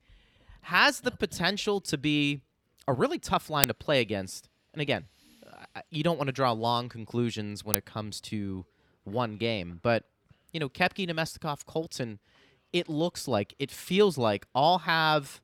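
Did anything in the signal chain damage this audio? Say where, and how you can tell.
Yes. Twice the speech is hit by an uninitialised buffer at the driver or buffer stage. The first is at 3.64 s, between "be a really tough" and "to play against", and the second at 7.74 s, between "draw long conclusions when" and "it comes to one". Each is a loud crack lasting about 2.9 ms, which fits a 128-sample block. That block was sent out before any audio had been written to it, so stale memory was played as samples. A dropout would go quiet and a clipping error would follow the waveform, but here the noise is sudden, loud and unrelated to the speech around it.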